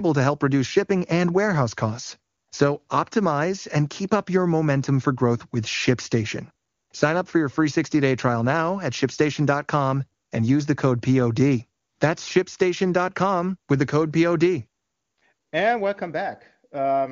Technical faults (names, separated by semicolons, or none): none